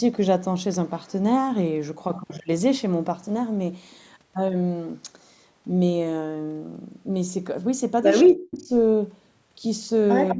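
A speech recording from a call. From 8.24 to 8.7 s and again from 10.34 s to the end, an echo canceller likely faced double talk and turned down the near talker along with the echo: speech suppressed in double talk. The voice sinks by up to about 40 dB in the first stretch and about 20 dB in the last moment. The same canceller also likely failed to remove all the loudspeaker sound its microphone picked up, causing echo leak. Faint scraps of delayed speech, lagging by about 200 ms, surface at 8.26 to 8.32 s and 8.6 to 8.65 s, about 30 to 35 dB down, then more clearly at 10.29 to 10.35 s, about 15 dB below the speech.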